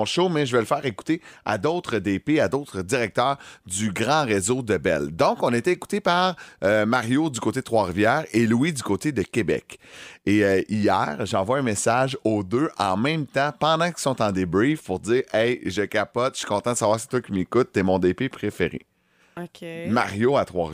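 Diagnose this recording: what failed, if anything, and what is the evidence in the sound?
Nothing failed: no stage in the chain leaves audible evidence of a fault anywhere in the speech recording.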